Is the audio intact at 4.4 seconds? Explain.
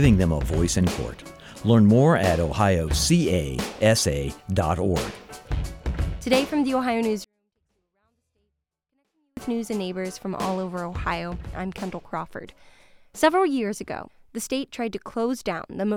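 Yes, at 4.4 seconds the audio is intact, with no dropout, click, distortion or other fault at that point.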